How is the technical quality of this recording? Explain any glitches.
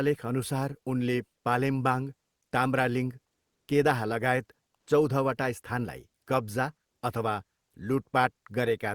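Two brief glitches affect the background of this speech recording. Comfort noise in place of the background appears from 3.49 to 3.67 s (180 ms), at the same level, and from 4.77 to 4.87 s (100 ms), about 3 dB quieter. The cause is likely discontinuous transmission, which fits Opus DTX. The faint room sound, about 55 dB below the loudest speech, gives way to steady, featureless hiss. Unlike a dropout, the pause never falls silent.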